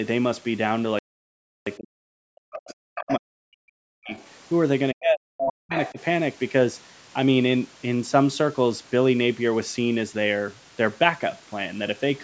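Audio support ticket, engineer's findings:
Playback stall, 0.99–1.67 s. Output goes silent for about 0.68 s mid-flow, then resumes. Likely cause: player buffer underrun or blocked audio thread.

Speech suppressed in double talk at 1.77–4.17, 4.93–5.29, 5.46–5.75 and 5.92–5.99 s. Talker dips or chops out, by up to about 40 dB, only about 10 dB in the last one. Likely cause: echo canceller unable to separate near talker from loudspeaker echo, attenuating both.

Other side's voice leaking through at 3.09–3.14, 4.11–4.30, 5.38–5.52 and 5.77–5.93 s. Short scraps of a second voice. The loudest sits only slightly below the talker and the faintest is well buried. Likely cause: residual far-end echo not removed by the echo canceller.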